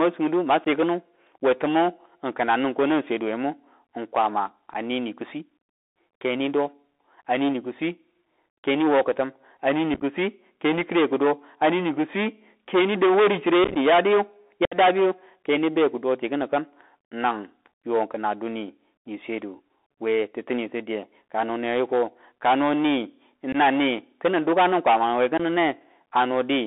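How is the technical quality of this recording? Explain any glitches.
The technical quality is poor: the speech is heavily distorted throughout, confined to a narrow telephone band, and broken by several short dropouts.

Hard clipping runs through the whole clip. The signal was driven about 19 dB past the point where a stage in the chain could pass it, so roughly a tenth of the samples are sliced off flat at the ceiling. Those squared-off tops generate strong upper harmonics, heard as a constant harsh fuzz on every loud syllable rather than occasional crackle. On a waveform the peaks sit pinned against a flat line; a spectrogram shows smeared energy filling the band above each voiced sound.

The Bluetooth CVSD headset codec also shapes the entire recording, and its damage is plainly audible. The sound is limited to roughly 250 Hz to 3.7 kHz, which fits a 64 kbps CVSD headset link. That codec tracks the waveform one bit per sample, stepping up or down with an adaptive step size. 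Fast, loud high-frequency movement outruns the step, so sibilants turn scratchy over a granular hiss. A spectrogram shows a hard ceiling near 3.7 kHz with nothing above, little below 250 Hz, and a grainy noise floor inside the band.

Unconcealed Bluetooth headset packet loss punches holes in the speech. Short gaps occur at 0.65 s (about 15 ms), at 4.74 to 4.76 s just before "nini kiswi", at 23.52 to 23.56 s just before "ni kini du kana", and at 25.38 to 25.40 s just after "du kana kwama we". Each of these is around 11 to 19 ms of missing audio, which fits the loss of a few packets. Rougher stretches occur at 9.94 to 10.03 s and 13.64 to 13.77 s, where losses are scattered in bursts no longer than about 11 ms each and sound chopped and crackly. At 14.65 to 14.77 s about 64 ms is lost. The missing packets were replaced by silence or an idle pattern, so each gap starts and ends abruptly, and the audio resumes briefly quieter. 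A waveform shows near-flat notches with vertical edges; a spectrogram shows thin blank vertical stripes.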